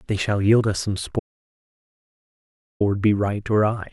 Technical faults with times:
1.19-2.80 audio dropout to silence

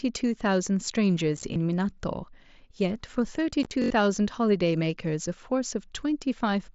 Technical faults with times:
1.37-1.43 unconcealed Bluetooth headset packet loss
1.54-1.56 repeated buffer
3.63-3.71 unconcealed Bluetooth headset packet loss
3.82-3.90 repeated buffer

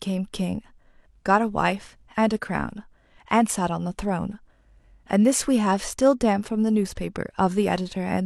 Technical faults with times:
none

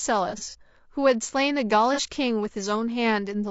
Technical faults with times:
0.00-3.51 low-delay AAC compression
0.29-0.55 AAC frame loss with concealment
1.94-1.99 AAC frame loss with concealment

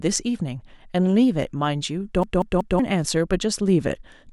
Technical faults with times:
2.23-2.79 CD stuck on one turn

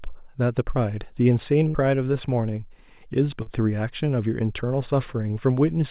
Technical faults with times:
1.68-1.76 burst of packet loss
3.42-3.48 short concealed packet loss

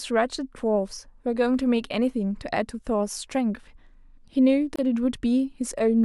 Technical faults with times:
4.76-4.79 gap at a join of encoded pieces

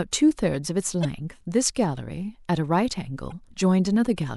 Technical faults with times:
1.01-1.05 damaged data in a compressed stream
3.28-3.32 damaged data in a compressed stream

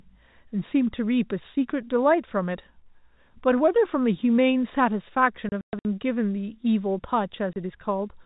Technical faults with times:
5.49-5.85 packet loss filled with silence
7.53-7.56 packet loss filled with silence

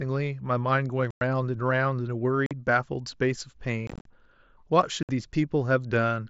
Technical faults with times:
1.11-1.21 unconcealed Bluetooth headset packet loss
2.46-2.51 unconcealed Bluetooth headset packet loss
3.87-4.06 unconcealed Bluetooth headset packet loss
5.03-5.09 unconcealed Bluetooth headset packet loss

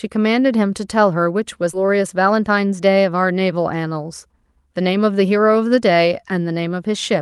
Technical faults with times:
1.73-1.87 skip ahead
2.31-2.82 jitter buffer speed-up

